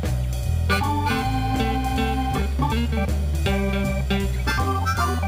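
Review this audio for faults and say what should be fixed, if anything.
Imaging from sample-and-hold upsampling runs through the whole clip. The audio appears to have come from a 24 kHz rate and been raised to 44.1 kHz by holding each sample until the next, with no interpolation filter. That stepped waveform mirrors the spectrum around 24 kHz, putting the first image between 12 and 24 kHz at about 25 dB below the signal. It is heard as a bright metallic fizz that tracks the level of the sound. To prevent it, resample with a proper band-limited interpolator that removes everything above 12 kHz.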